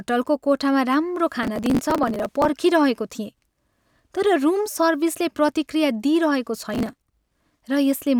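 It's a speech clip with two bursts of processor overload crackle: 1.43 to 2.49 s, just after "कोठामा राम्रो", and 6.74 to 7.42 s, after "सर्भिसले प्रतिक्रिया दिइरहेको". Dozens of tiny buffers, around a millisecond and a half each, get skipped in a row, leaving hard-edged gaps that add up to gritty tearing.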